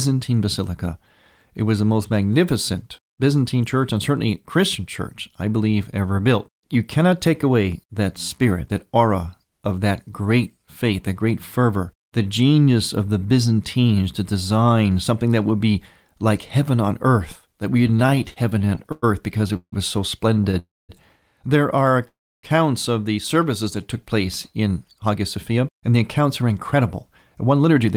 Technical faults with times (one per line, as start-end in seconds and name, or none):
17.87-19.74 repeated stalls (stutter)
20.34-20.55 repeated stalls (stutter)
20.59-20.91 call audio freeze
22.08-22.45 call audio freeze
24.71-26.97 jitter buffer speed-up
27.45-27.95 jitter buffer speed-up